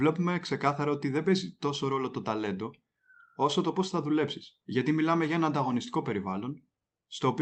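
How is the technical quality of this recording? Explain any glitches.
No glitches or faults are audible.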